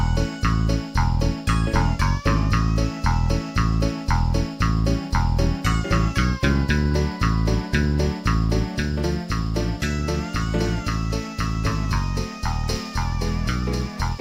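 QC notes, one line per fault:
Nothing here to flag, since no faults turned up anywhere in the audio.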